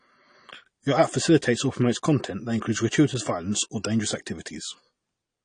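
From start to finish the speech sounds dull and smeared, with the top end rolled off and a fizzy, warbling texture on sibilants and held vowels. That's likely AAC compression, AAC-LC run at a low bitrate that fits something around 32 kbps. Starved of bits, the encoder drops the cut-off and quantises the spectrum coarsely, so whole bands go missing or turn into swirly noise, and the damage is plainly audible throughout.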